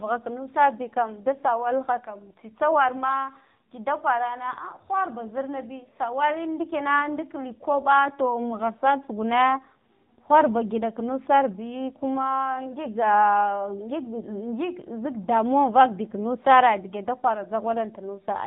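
AMR narrowband mobile codec throughout: speech rebuilt from a pulse-driven vocal-tract model loses everything above 4 kHz and sounds plainly buzzy, consistent with about 7.4 kbps.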